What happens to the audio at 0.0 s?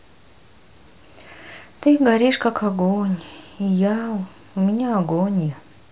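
Nothing goes wrong at 0.0 s; the speech audio is intact at that moment.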